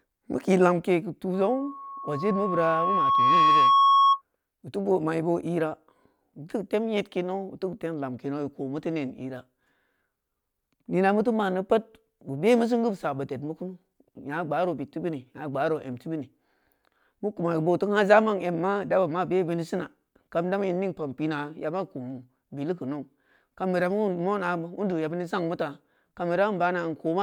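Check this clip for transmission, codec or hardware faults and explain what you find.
One hardware fault is present. From 1.33 to 4.22 s, after "kii lonkei geu" and before "butu boo mai boo", there is loudspeaker feedback squeal. The microphone re-captures its own loudspeaker, and loop gain above unity at 1.1 kHz sustains a tone that swells over about two seconds to roughly 10 dB above the speech.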